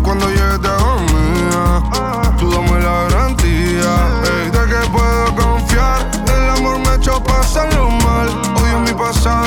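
No technical faults can be heard anywhere in the signal.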